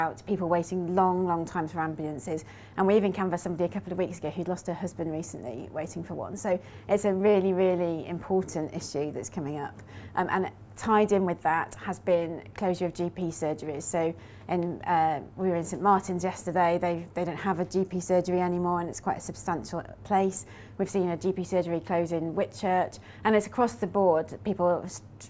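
No technical faults can be heard anywhere in the recording. Nothing in it calls for a timestamp or an explanation.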